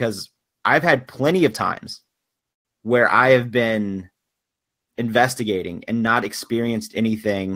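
After "had plenty of times", a call audio freeze at 2.51 to 2.67 s leaves a 130 ms silence, likely from packets delayed in transit. It shows as a flat waveform and a blank spectrogram band before "where I have been".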